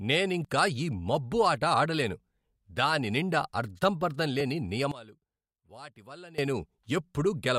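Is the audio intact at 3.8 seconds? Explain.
Yes, the speech at 3.8 seconds is intact, with no audible fault at that moment.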